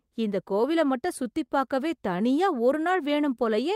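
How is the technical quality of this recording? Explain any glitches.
The speech has two timing glitches, both from the receiver's jitter buffer.

From 1.46 to 1.51 s there is a short stall from a late packet. A packet missed its playout time and the buffer ran dry. The receiver held the last sound for about 24 ms until the packet arrived. Then playback resumed exactly where it stopped. Nothing is lost. One sound is simply held a little too long, with a faint buzz or dip.

From 2.92 to 3.73 s there is a jitter buffer slow-down. The buffer needed more reserve, so the receiver repeated tiny stretches of the signal, single pitch periods or slivers of pause, many times over. This added 44 ms across the passage. Playback runs at 96% speed. The pitch stays the same. The speech sounds slightly drawn out and may carry a light warble.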